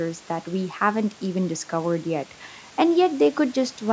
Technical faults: none

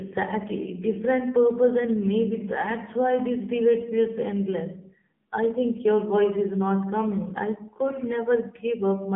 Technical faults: AMR narrowband mobile codec

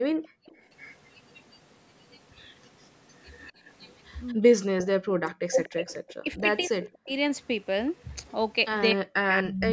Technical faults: background gated by the echo canceller; echo leak; speech suppressed in double talk

